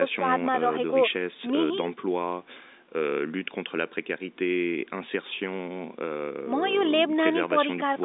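Nothing here counts as a technical fault: the speech just carries the narrow, boxy sound of an ordinary phone line, with nothing above about 3.8 kHz and the lowest bass trimmed away the way call processing normally does.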